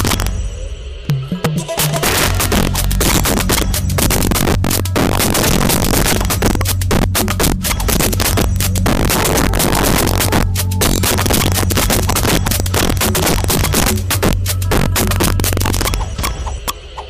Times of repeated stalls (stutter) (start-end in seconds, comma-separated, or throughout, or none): none